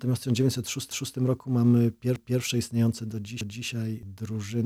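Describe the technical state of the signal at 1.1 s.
At 1.1 s the signal sits inside an overlapping-chunks fault spanning 0.91 to 1.16 s. A chunk about 1.0 s long began before the previous one finished, so 250 ms of sound plays twice at the join, heard as a brief stutter.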